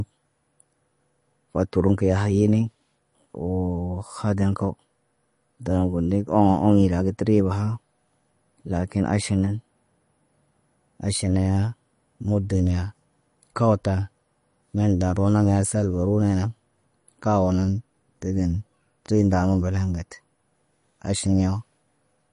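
From start to finish the speech has a hard treble ceiling at 10.6 kHz and a watery, swirling texture, with chirpy s sounds and smeared onsets. This is plainly audible damage, likely from MP3 compression at a low bitrate around 40 kbps, where the encoder drops quiet frequency lines frame by frame.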